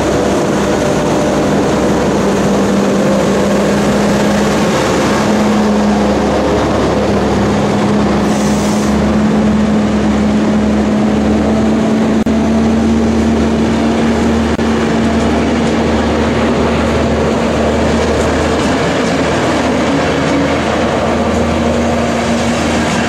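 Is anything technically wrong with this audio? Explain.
Yes. Separately encoded pieces were joined without trimming the encoder start delay and last-frame padding, leaving a gap at a join of encoded pieces at 12.23 to 12.26 s (about 35 ms) and 14.55 to 14.58 s (about 30 ms). Each is a short dropout with smeared edges, and the sound resumes where it stopped.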